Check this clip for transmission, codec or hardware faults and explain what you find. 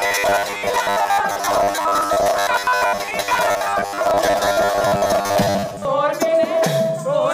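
One fault is present. From 0.01 to 5.87 s, robotic sound from repeated short buffers: audio likely arrived too seldom, so 10 ms slices filled about half the time, imposing a rigid metallic 100 Hz buzz.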